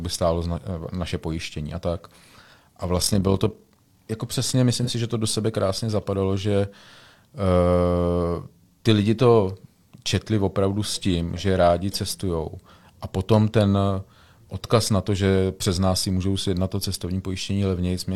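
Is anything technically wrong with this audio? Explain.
Yes, there are two faults in this speech.

Overlap-add ripple runs from 2.95 to 3.80 s, just before "jako přesně". The frames were rejoined with overlaps that don't sum to a steady gain, so the level swings by about 6 dB around 40 times a second. This is heard as a rough flutter.

AAC frame loss with concealment occurs from 4.83 to 4.90 s, between "jako přesně" and "si že to do". About 43 ms of audio is missing, which fits a single lost frame. The decoder patches the gap from the preceding spectrum, leaving a brief smeared, noisy blur.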